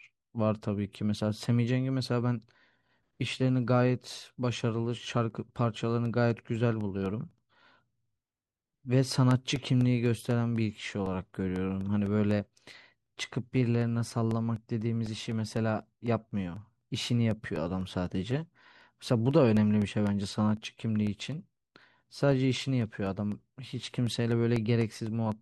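Speech with periodic USB or driver dropouts from 5.06 s to 25.32 s: tiny gaps of about a millisecond every 0.25 s, roughly seventy regular ticks over the speech.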